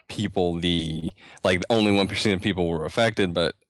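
Between 0.75 and 1.12 s, packets kept arriving lost or too late, and the receiver covered each hole by stretching the last sound it had. This is repeated packet loss (robotic sound). The pattern points to about four separate gaps, the longest around 24 ms. Roughly a fifth of that stretch is patched material. The speech turns choppy, with short slivers dropping out and brief stretches of held-over sound standing in for them.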